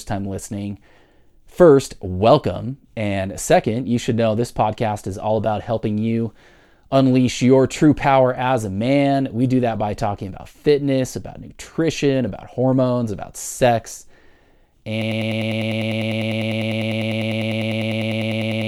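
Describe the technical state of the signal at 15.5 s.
At 15.5 s you're inside a broken-record loop that starts at 15.02 s and runs to the end of the clip. A 100 ms slice of the speech repeats back to back, about 37 times, likely because playback stalled and kept resending its last fragment. Whatever should have followed is gone.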